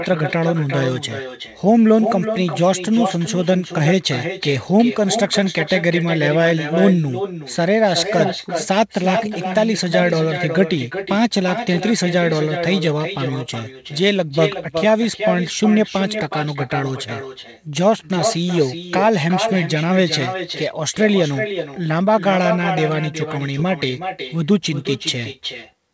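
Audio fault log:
Throughout: echo with no canceller. Each phrase returns about 400 ms later, around 8 dB quieter and thinner, because the far end's loudspeaker feeds its microphone with nothing removing it. The waveform shows every burst trailed by a smaller delayed copy, and the spectrogram shows faint repeated patterns offset in time.
23.59 to 23.65 s: bit errors on an ADPCM link. Flipped bits on the wideband G.722 link, at roughly a few errors per thousand, produce rough pops and a brief level jump lasting about 60 ms as the decoder's step size and predictor ring on. On a spectrogram this appears as broadband vertical smears, and the waveform shows spiky irregular amplitude.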